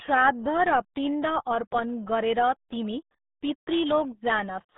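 Speech, carried throughout by the RealAudio 14.4 codec, the dial-up era RealAudio 1 speech coder. Its band runs from about 150 Hz to 3.7 kHz, with nothing above 3.8 kHz, so sibilants and consonant detail are gone and the sound is dull and boxy. Coding damage is heavy, adding a muffled, gargly texture, which fits the roughly 8 kbit/s rate this coder was designed to squeeze through a modem line.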